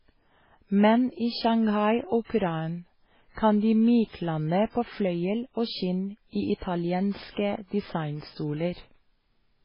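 Speech runs through the whole clip with heavy MP3 compression damage, likely the cause of its dull, watery quality. Nothing remains above 5.3 kHz. Weak detail flickers in and out, and s sounds turn swirly. The damage fits a very low bitrate, around 16 kbps. At 2.24 s a pre-echo appears. A short hiss leads a sharp attack by about 48 ms, ending at 2.29 s. The codec spread its noise across the block, so the quiet moment before the attack filled with hiss.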